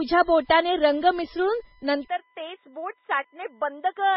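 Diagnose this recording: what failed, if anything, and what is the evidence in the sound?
There's a steady USB whine running the whole way through: a fixed tone at 1 kHz, loudest at its 2 kHz harmonic, sitting about 35 dB under the speech. That's the bus's 1 ms frame timing leaking into the analogue side through power or ground.

Nothing survives above 5.6 kHz, and the top end carries a mix of smeared, swirly artefacts that don't come from a single encoder. That points to transcoding between lossy codecs, likely a very low-bitrate MP3 pass followed by WMA. The second encoder faithfully re-encoded the first one's damage, and the lower cut-off stuck.

At 2.08 s the input seems to have switched to a poorer device, likely at the driver level, and it stays there to the end. The band narrows abruptly to nothing above 3.8 kHz, the level drops about 5 dB, and a new, faint noise floor appears with no gap at the handover.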